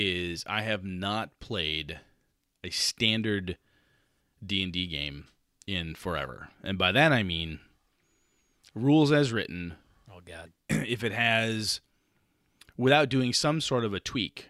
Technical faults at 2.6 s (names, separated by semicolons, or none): none